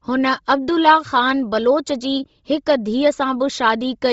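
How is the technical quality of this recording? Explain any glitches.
The technical quality is poor: heavy codec damage runs through the entire speech clip. Throughout, the likely cause is Bluetooth LC3 compression at a rate that points to about 24 kbps. Nothing survives above 7.7 kHz, and the zeroed upper bands are noise-filled, giving the speech a breathy, grainy edge.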